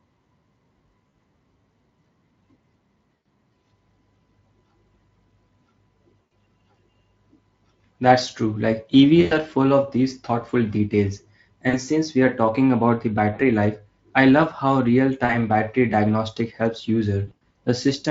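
VoIP packet loss concealed by the speech codec hits the speech at 1.09, 3.16, 6.21, 9.21, 11.69, 13.33, 15.25 and 17.27 s. Each gap of 40 to 100 ms, and 180 ms scattered over 280 ms at the end, is bridged with buzzy or noisy, fading extrapolation. Spectrograms show smeared, decaying harmonics; waveforms show shrinking envelopes.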